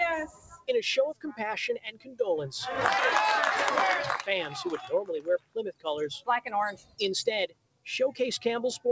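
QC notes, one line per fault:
Throughout: noise suppressor applied to music or sounds. A speech-tuned suppressor stayed active and kept treating sustained, steady material as noise. Level swings by roughly 15 dB as it engages and releases, so held sound pumps and thins while onsets pass, over a G.722 path with nothing above 8 kHz.
0.27–0.68 s, 1.14–1.40 s, 1.78–2.20 s, 5.19–5.86 s, 6.20–6.51 s, 6.72–7.01 s, 7.47–7.86 s: sound cut by the noise suppressor. The suppressor classed these stretches as noise and pulled them down hard, by about 16 to 20 dB at the deepest. Sustained and decaying parts sink and tails are clipped short.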